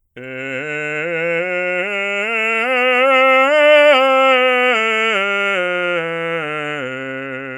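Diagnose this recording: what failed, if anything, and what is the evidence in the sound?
Nothing failed here: the music comes across without any fault to point to at any stage of the chain.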